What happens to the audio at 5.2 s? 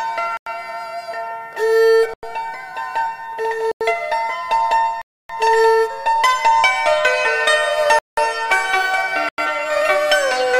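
At 5.02–5.29 s, a block of digital silence: about 279 ms of audio drops to silence, a flat waveform line and blank spectrogram band, with abrupt edges.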